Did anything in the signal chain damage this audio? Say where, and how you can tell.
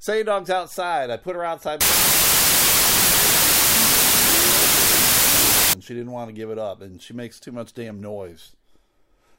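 Yes: from 1.81 to 5.73 s the speech drowns in loud noise, slowed to half speed and an octave low. This is wrong sample width at sample-format conversion: 32-bit integers were read as 16-bit.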